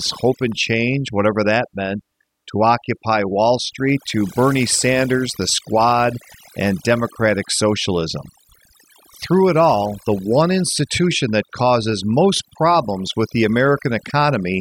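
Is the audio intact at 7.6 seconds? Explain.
No. At 7.6 seconds, as across the whole speech clip, the background breaks up into twinkling, warbling specks. This is overdone noise removal: frequency bands near the noise estimate get pulled far down or cut, taking quiet parts of speech with them.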